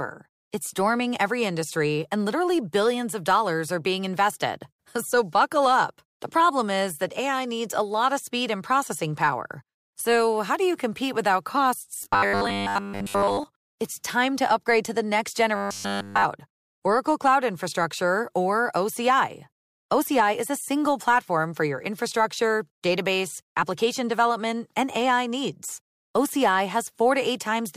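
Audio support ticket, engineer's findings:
Robotic sound from repeated short buffers, 12.03–13.45 s and 15.56–16.25 s (after "to the next"): rigid metallic 100 Hz buzz. Likely audio arriving late, with a 10 ms buffer looped in place of skipped audio: most of the first span, all of the second.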